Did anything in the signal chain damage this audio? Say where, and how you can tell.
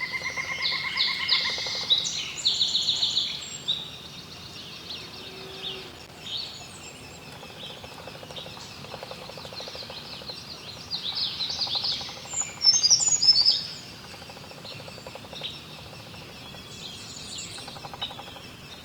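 Yes. In the analogue wiring, a loose connector crackle runs from 5.89 to 6.15 s. A worn or dirty contact was making and breaking as it moved, chopping the signal. The result is a short, irregular burst of scratchy crackle laid over the audio.

At the network and codec stage, the adaptive stream switches to a lower bitrate at 16.31 s and stays there until the end of the clip. The quality drops suddenly, with no gap, and codec artefacts rise. This fits a slowed connection forcing a step down from roughly 64 kbit/s Opus to 16 kbit/s.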